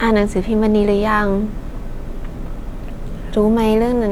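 Nothing in this speech recording stood out as a technical problem on listening.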